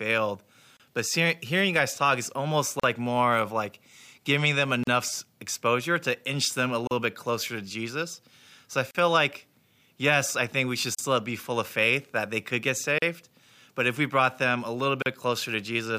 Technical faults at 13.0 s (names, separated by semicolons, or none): gap at a join of encoded pieces